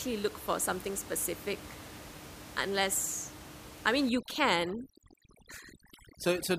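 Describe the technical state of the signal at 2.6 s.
At 2.6 s the speech signal is intact, with only the room's own background noise sitting about 16 dB below the speech.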